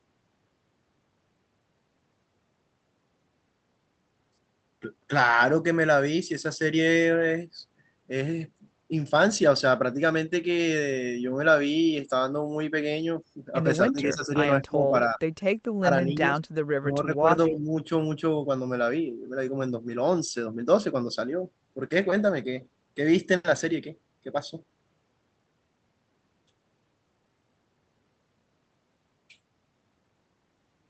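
Speech over an Opus call link shows speech suppressed in double talk at 13.88, 14.67, 15.14, 15.79, 16.06 and 16.8 s, dipping from slightly to about 30 dB, likely echo-canceller ducking. Unlike packet-loss dropouts, these dips likely come from the echo canceller turning the voice down while both sides talk.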